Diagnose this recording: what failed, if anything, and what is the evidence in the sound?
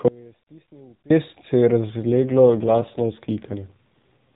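The speech drops out from 0.08 s to 1.10 s, a gap of about 1.02 s, ending just before "se je". This is an audio dropout to a faint residue: the wanted signal vanishes abruptly, but the gap is not digital silence. A faint leak remains, about 30 dB below normal level, so the path downstream stayed live. The likely cause is a loss of the wanted signal upstream of a path that stayed live. A natural pause or fade would tail off gradually instead of cutting out.

From 2.06 s to 4.19 s, after "se je", the voice turns rougher, buzzier and more synthetic. This is an AMR rate drop at the codec and network stage: the link pushed the AMR-NB encoder down from 12.2 kbps to 5.9 kbps, spending fewer bits on the voice model. The bandwidth stays the same, capped below 4 kHz as in the 12.2 kbps stretches, and there is no gap. That distinguishes it from a codec switch or a dropout.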